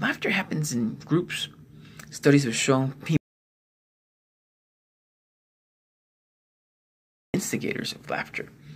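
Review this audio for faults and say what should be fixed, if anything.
Input was likely lost from 3.17 to 7.34 s while silence kept recording, an audio dropout to silence lasting 4.17 s, cut abruptly with no room tone. Secure cables and connections, check mute states, and monitor input levels during recording so that a lost signal is caught right away.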